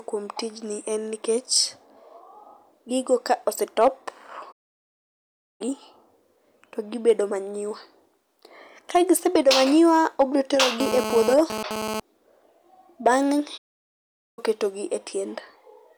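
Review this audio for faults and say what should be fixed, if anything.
Twice the speech cuts out mid-flow into dead silence and then resumes: a playback stall from 4.52 to 5.61 s, lasting about 1.08 s, and a second from 13.57 to 14.39 s, about 0.8 s, ending just before "ketogi e". The likely cause is the player running short of data or its output thread being blocked, so nothing reached the output until it recovered. To prevent it, give playback a larger buffer and keep the audio thread free of blocking work.

From 10.80 to 12.00 s, right after "gisebedo manyiwa obiro", a hard, raspy GSM phone buzz sits over the speech, pitched at 217 Hz with a dense stack of harmonics and roughly 6 dB below the speech level. A nearby 2G phone sending data was pulsing its transmitter 217 times a second, and the audio circuitry rectified those radio bursts into sound, so the buzz comes and goes rather than holding steady. 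Keeping phones well away from the microphone, cables and interface, or switching them to airplane mode, prevents it.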